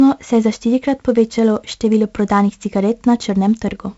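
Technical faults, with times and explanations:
Throughout, 4-bit ADPCM compression: each sample is stored as a coarse 4-bit step from a prediction, leaving heavy gritty hiss on loud speech and distorted onsets. A spectrogram shows broadband noise that tracks the level between harmonics and nothing above 7.7 kHz, which fits a 16 kHz, 64 kbps stream.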